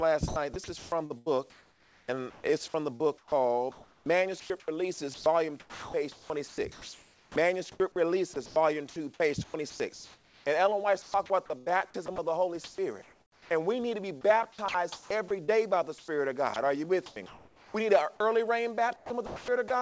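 Sound chopped by the voice detector, likely a sender-side detector gating the audio, recurs at 0.28–7.80 s, 8.34–10.46 s, 11.02–13.50 s, 14.21–18.20 s and 18.96–19.70 s. Quiet edges give way to smooth synthetic comfort noise, not silence or clicks as in packet loss. Nothing reaches above 8 kHz, which fits the G.722 call codec.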